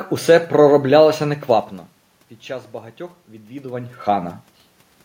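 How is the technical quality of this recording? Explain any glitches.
No technical faults are audible.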